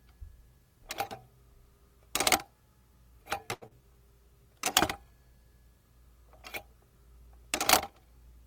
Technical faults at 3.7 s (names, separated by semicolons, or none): short stall from a late packet; short concealed packet loss